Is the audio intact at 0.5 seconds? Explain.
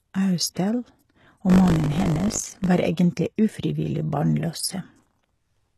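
No. Right around there, from about 0.54 to 0.56 s, there's a pre-echo lasting roughly 24 ms. The codec spreads its quantisation noise across a whole transform block, so when a sharp attack lands late in the block, noise that belongs to the loud onset leaks into the quiet stretch just before it. You hear a brief hiss ahead of the attack, and the onset itself comes across softened and smeared rather than crisp.

That sits on top of damage that runs through the whole speech clip, plainly audible and most likely from HE-AAC compression. Only the lower spectrum is really coded. The top end is rebuilt by copying lower bands upward and shaping them with a coarse envelope, so the harmonics don't line up across the crossover. Sibilants get gritty, metallic or lispy, and nothing comes through above about 12.4 kHz, which fits a low bitrate somewhere around 16 kbps.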